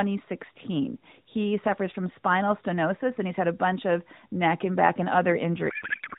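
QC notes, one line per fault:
5.70–6.18 s, codec payload misread: speech collapses into garbled warble to the end. Octet-aligned AMR frames are unpacked as bandwidth-efficient, so every field lands misplaced.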